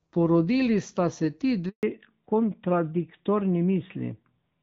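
At 1.69 s, just after "sta se ti", the call is handed from one network to another and no speech frames arrive during the switch. This handover gap lasts 140 ms, until 1.83 s. The sound dies away within a few tens of milliseconds and stays silent until the new link comes up, and whatever was spoken in that stretch is simply lost rather than muffled or delayed.

From 1.83 s to the end, the link does not return to HD Voice but falls back to narrowband, dropping from the AMR wideband (HD Voice) codec to AMR-NB. The clarity before the gap is consistent with a wideband rate of around 12.65 kbit/s, while the new codec's band limit cuts off everything above 4 kHz. As a result, the speech turns duller and rougher, losing the sibilant edge and airy top it had earlier in the call.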